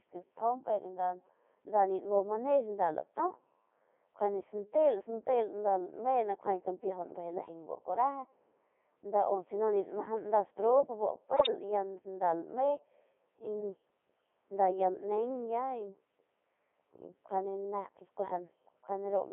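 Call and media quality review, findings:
Codec 2 vocoder, throughout: robotic, buzzy synthetic speech, band-limited to 300 Hz–3.4 kHz. Decoder rebuilds voice from pitch, voicing, energy and spectral envelope at 3.2 kbit/s; waveform not preserved, heavy damage.

Bit errors on digital voice radio, 11.36–11.56 s: sudden pitch, level and timbre jumps, warbling gibberish. Flipped bits, around 4 percent, corrupt vocoder frame parameters; damage spans roughly eight frames.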